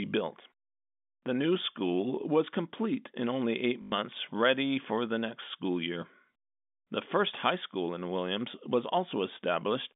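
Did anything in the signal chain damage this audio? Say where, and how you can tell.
Yes. At 3.82 to 3.92 s, between "complete in only eight" and "ready for the next", a robotic stutter buzzes for 100 ms. That is packet loss with the last packet repeated in the network path. The 50 Hz buzz fits lost 20 ms packets being replayed.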